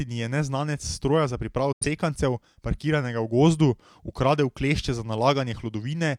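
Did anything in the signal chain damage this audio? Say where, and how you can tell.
Yes, there's a digital broadcast dropout at the reception and decoding stage. Right after "neznanec s stroja za" the speech fades out over about 8 ms at 1.72 s and stays silent until 1.86 s. That quick fade into a clean hole, not a click or smear, is the receiver muting when frames fail their checks. About 85 ms of programme is simply gone, which fits a couple of lost frames, and it picks up mid-stream rather than resuming where it stopped.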